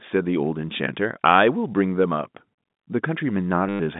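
From 3.69 to 3.8 s, packet loss with the last packet repeated patches a 110 ms gap with copies, giving a robotic buzz that fits 10 ms packets.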